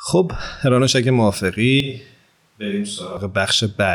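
Speech, in which the close microphone's feed most likely drops out from 1.80 s to 3.17 s and the recording falls back on a distant microphone, a switch to a distant microphone. Across that span the voice turns abruptly roomy and hollow, thinner in the low end, about 10 dB quieter, with a faint bed of room noise now audible far beneath it. At 3.17 s the close, full sound returns just as suddenly.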